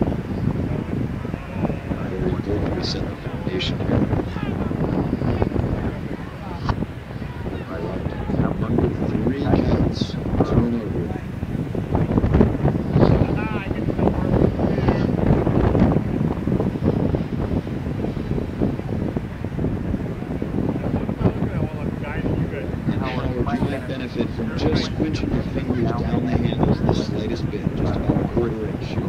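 From start to finish the audio carries computer activity noise. As the processor, graphics card or mouse changes its load, the current it draws shifts the ground that the audio circuit shares with it. That fluctuation gets into the signal as a faint buzzing chirp pulsing at around 500 Hz, roughly 35 dB below the wanted sound. It rises and falls with what the machine is doing rather than with the sound itself.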